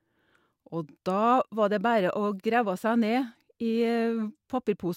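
No technical faults are audible.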